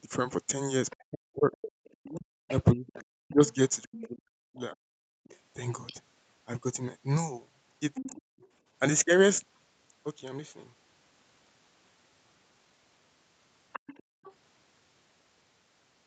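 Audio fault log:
0.9–5.95 s, 7.94–8.48 s and 13.73–14.33 s: other side's voice leaking through. A second, fainter voice runs under the talker, about 20 dB below the main speech in the first stretch and about 15 dB below in the two shorter ones. This points to the far end playing on a loudspeaker and reaching the microphone, with the echo canceller likely leaving a residual it did not fully subtract.
0.97–4.87 s and 7.97–8.21 s: speech suppressed in double talk. The talker's own speech drops in level while the leaked voice is present. In the first stretch, roughly 2 s of it is affected, with dips as deep as about 40 dB, so parts nearly vanish. In the second, about 200 ms dips by about 20 dB. With both ends active, the canceller likely could not tell near speech from echo and attenuated both.
5.15–5.24 s and 14.03–14.23 s: background gated by the echo canceller. The room sound briefly falls away and then returns, dropping about 35 dB for roughly 90 ms and about 32 dB for roughly 200 ms. 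Both gaps sit inside or right after loudspeaker activity, where the canceller clamped the microphone hard and then released it. This produces a short hole in the ambience rather than in the speech itself.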